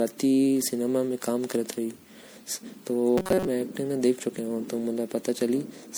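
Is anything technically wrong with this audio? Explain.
Yes, there are two faults. Generation loss runs through the whole clip: the speech sounds swirly, hollow and smeared, with blurred attacks, likely from repeated lossy re-encoding. About five passes at an MP3-like rate near 96 kbit/s would explain it, each requantising on a shifted frame grid so noise and spectral gaps accumulate.

Robotic sound from repeated short buffers occurs from 3.18 to 3.47 s. The speech collapses into a rigid metallic buzz at 188 Hz, likely because audio arrived too late and a buffer of about 5.3 ms was looped in its place, skipping most of the real signal in that stretch.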